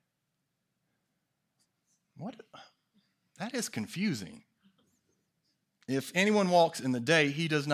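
No technical faults can be heard anywhere in the recording. The speech continues without any audible break or disturbance in the signal.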